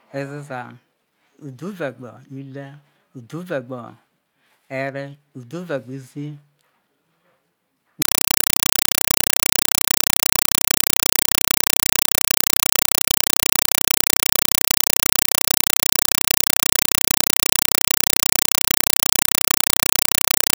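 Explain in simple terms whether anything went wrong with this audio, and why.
Something went wrong starting at 8.02 s. From there to the end, the speech is replaced by loud, rapid, chattering static. This fault is a compressed stream played as audio. The link carried a Dolby Digital (AC-3) stream, but the receiving end treated the coded data as ordinary sound instead of decoding it. Each coded frame comes out as a 4 ms burst of noise followed by silence, repeating 31.25 times a second, which gives the static its chattering rhythm.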